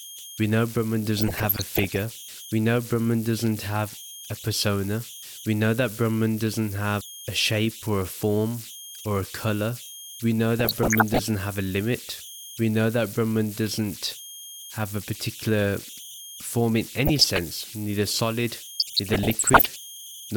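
Throughout the speech, converter idle tones sit about 17 dB below the signal: a delta-sigma stage running without dither settles into repeating bit patterns on low-level input, producing a whistle around 3 kHz that is exposed in pauses and turns to grainy noise under quiet passages.

DAB burbling breaks in at 1.17–2.02 s, again at 10.59–11.22 s just before "have a limit", at 17.06–17.39 s between "a particular form in" and "neither solid", and at 18.77–19.78 s after "neither solid". Weak reception lets bit errors, somewhere around half a percent to under one percent, slip past error correction into the MP2 data, corrupting samples into short noise blips in single sub-bands and scale factors so sub-bands jump in level for up to a frame. The result is burbling laid over the speech. The length of each burst points to roughly 16 to 42 frames being hit.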